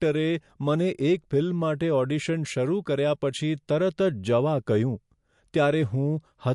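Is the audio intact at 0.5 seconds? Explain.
No. At 0.5 s, as across the whole clip, the speech has nothing above about 11.3 kHz, and its highs sound dull. This fits low-bitrate audio saved at a high bitrate: the sound was likely first squeezed through a low-bitrate MP3 encode, which removed the top band and left its artefacts, then re-encoded at a much higher rate that cannot restore either. A spectrogram shows a flat, hard ceiling at 11.3 kHz.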